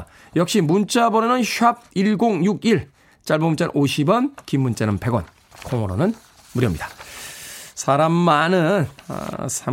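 No technical faults are audible.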